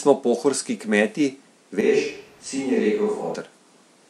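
At 1.81 s the speech abruptly turns roomy and hollow, loses low-end weight and drops roughly 5 dB in level, with background noise rising to around 30 dB below the speech. At 3.34 s it snaps back just as suddenly to the close, full sound. This is likely a switch to a distant microphone: the close microphone's feed dropped out or was left out, and a mic farther away picked up more room and less direct sound.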